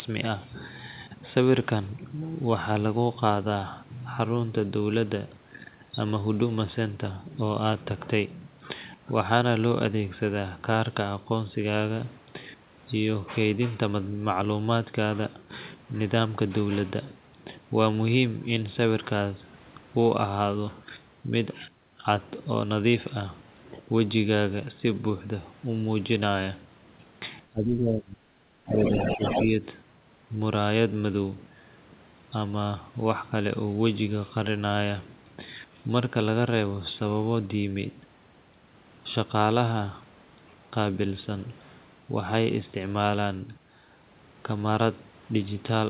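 From 27.5 to 28.22 s, and again from 28.44 to 29.65 s, the speech dips sharply, by about 20 dB at its deepest. This is likely speech suppressed in double talk. The echo canceller confused both talkers and turned everything down.

From 28.68 to 29.44 s, inside the second dip, a second voice comes through. It sits only about 5 dB below the talker. This is likely the other side's voice leaking through. The echo canceller left part of the loudspeaker signal in the microphone. Throughout the clip, nothing is heard above 4 kHz, which fits a narrowband telephone codec on the call path.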